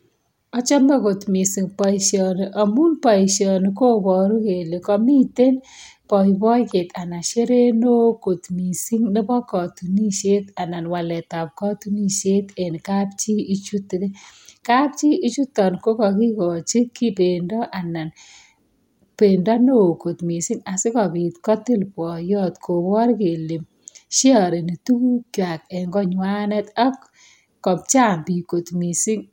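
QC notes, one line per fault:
No faults found in this speech clip. Nothing here needs a timestamp or a further note.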